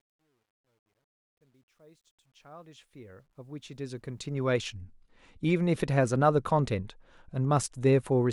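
A speech clip whose fade-in sounds gritty from 0.0 to 4.72 s, worst until 2.9 s. This is truncation distortion on a fade: undithered gain, consistent with roughly 11-bit resolution, turning the quiet signal into coarse steps.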